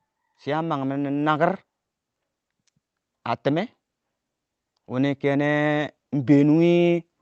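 From 4.89 s to 7.09 s there's automatic gain rising: the gain control decides the speech is too quiet and ramps up by about 5 dB over those two seconds, so voice and room noise swell together, all through an Opus call path whose top end stops around 8 kHz.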